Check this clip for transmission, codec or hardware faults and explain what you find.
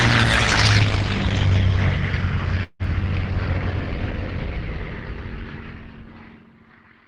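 One transmission fault stands out, heard over a call path whose top end stops near 12 kHz. At 2.63–2.82 s there is a long network dropout, likely lost packets. Concealment stretches the last sound into a fading buzz, then briefly goes silent. Unlike a short glitch, audio resumes with that stretch gone.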